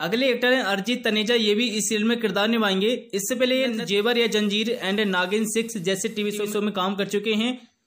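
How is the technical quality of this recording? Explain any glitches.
One glitch: from 3.51 to 6.65 s, digital radio blending to analogue. The receiver cross-fades over 485 ms to FM, bringing up hiss well below the signal with no level jump, unlike a dropout.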